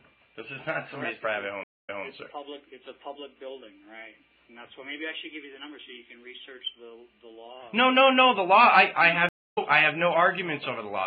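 Twice the sound drops out and picks up somewhere else: at 1.63–2.05 s a 0.23 s gap is followed by about 0.18 s repeating, and at 9.29–9.58 s a 0.26 s gap skips roughly a fifth of a second ahead. Both are stream reconnects, where the player lost its connection and restarted decoding mid-stream.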